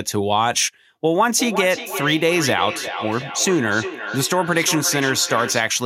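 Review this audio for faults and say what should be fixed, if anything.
Feedback echo between two devices: a second device replays this microphone's feed into it, so speech repeats roughly every 0.4 s from 1.3 to 5.74 s, about 9 dB down. To prevent it, keep only one device joined to the call with its speaker active in the room, or give everyone headphones.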